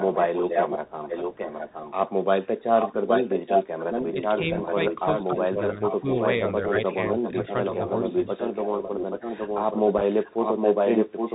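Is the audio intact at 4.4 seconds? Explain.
No. From 4.35 to 4.78 s the speech dips by roughly 5 dB in brief pieces totalling about 70 ms, likely speech suppressed in double talk as an echo canceller ducks both talkers; unlike a dropout, the sound thins rather than vanishing. An echo leak, present from 2.78 s onward, returns a copy about 821 ms late at roughly the speech's own level, likely from uncancelled loudspeaker pickup, too late to blur into reverberation. Throughout, the Bluetooth CVSD headset codec caps the bandwidth at 4 kHz and adds granular hiss and scratchy s sounds, unlike the smoother muffling of a plain low-pass filter.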